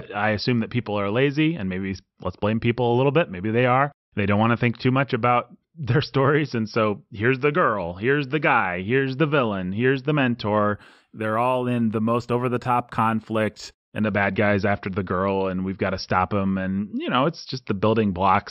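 A speech recording in which, from 10.74 to 14.02 s, the top end turns dull while a faint metallic shimmer clings to sibilants. This is imaging from linear upsampling. The sound appears to have been raised from a 12 kHz rate to 44.1 kHz by joining samples with straight lines. That weak interpolation softens the upper band and lets a mirrored copy of the spectrum through between 6 and 12 kHz, roughly 35 dB below the signal.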